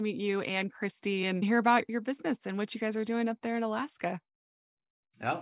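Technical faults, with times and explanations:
Nothing in this speech recording stood out as a technical problem on listening.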